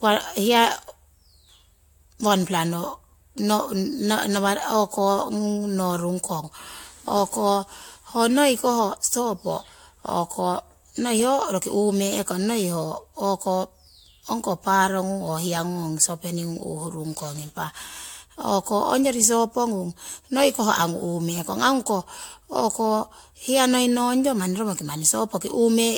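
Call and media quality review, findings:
Generation loss, whole clip. Swirly, hollow speech, smeared consonant onsets, band empty above 19 kHz. Likely repeated AAC-LC re-encoding, about four passes, fits a 96 kbit/s chain. Each pass requantises on a shifted frame grid, so artefacts accumulate.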